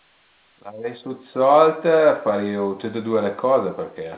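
No technical faults can be heard in the speech, which comes through a call path that is working as expected, with its band ending at 4 kHz in the way a G.711 A-law call codec limits it.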